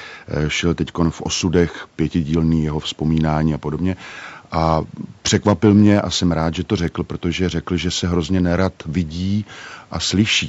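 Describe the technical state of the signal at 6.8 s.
At 6.8 s the speech is intact, with no dropout, distortion or other fault, only the normal bandwidth of call microphone processing, which leaves nothing above 8 kHz.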